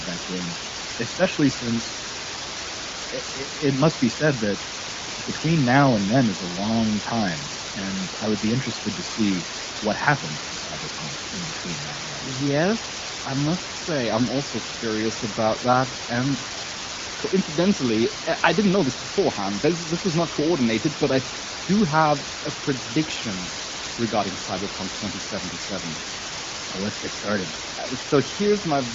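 From start to finish the speech sits under a steady, even hiss, the mark of low bit depth with dither. The sound points to about 4 bits, with dither turning the rounding error into white noise roughly as loud as the speech, but without gritty distortion, all inside the AMR-WB band that stops near 7.5 kHz.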